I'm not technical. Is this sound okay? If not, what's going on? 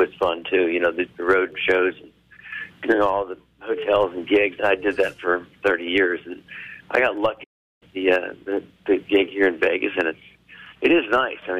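No. At 7.43 s the sound suddenly goes silent for about 0.37 s, then resumes at 7.83 s. This is a playback stall, likely the player briefly running out of data. Unlike a quick click or crackle, it is a clean, noticeable pause.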